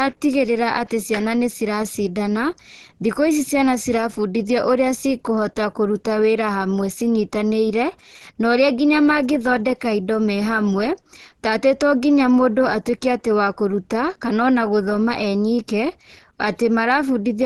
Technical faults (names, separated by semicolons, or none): low-bitrate audio saved at a high bitrate